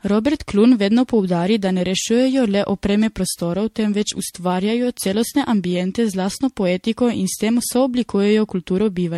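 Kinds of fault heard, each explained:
Generation loss: The speech sounds swirly, hollow and smeared throughout, with blurred consonant attacks and nothing above 16.4 kHz. This likely comes from around seven successive MP3 encodes near 65 kbit/s, each requantising on a shifted frame grid, so artefacts accumulate.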